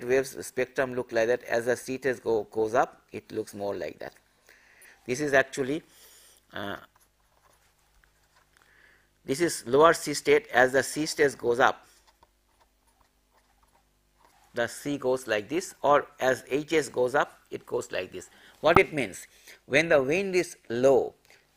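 Twice a compressed frame arrived with flipped bits and the decoder played it anyway, a corrupt frame decoded. Misread gains and codes put energy at the wrong frequencies for about the span of the damage: 4.82 to 4.85 s, which points to a single frame, and 18.75 to 18.77 s, which suggests about two. Each is heard as a brief blip or burst of wrong sound. The error at 18.75 s is far stronger than the much weaker one at 4.82 s.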